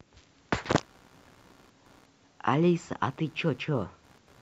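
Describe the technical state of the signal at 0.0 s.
At 0.0 s the signal is intact, with no technical fault present at that moment.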